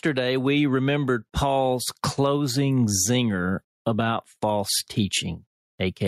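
Gain pumping runs through the whole speech clip. The swing is somewhere around 10 dB. The likely cause is input gain set way too hot, with a fast limiter or compressor clamping down on every peak. That leaves loud and quiet passages squeezed close together and the whole thing sounding squashed.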